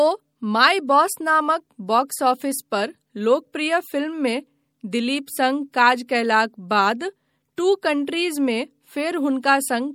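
Throughout the speech, MP3 compression damage is plainly audible as watery, swirling treble. The spectrogram shows flickering holes in the high bands and nothing above 20.7 kHz, likely from a low-bitrate MP3 encode around 64 kbps.

At 7.56 s, pre-echo puts a short hiss about 19 ms ahead of a sharp attack, softening it. The waveform shows low noise rising before the onset.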